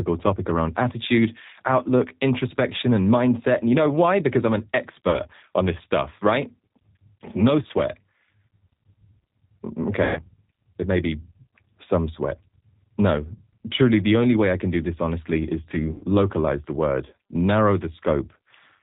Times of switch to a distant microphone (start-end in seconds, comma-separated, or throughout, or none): none